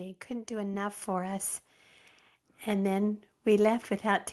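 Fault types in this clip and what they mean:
Microphone volume stepped up: The call software judged the microphone too quiet and raised its input volume in a single step. At 1.02 s the level jumps by about 6 dB. The speech and the background noise get louder together, at the same instant. Nothing fades in gradually. The change stays for the rest of the clip. The audio also passed through a call codec, and it carries coding noise and a cut-off near 12 kHz.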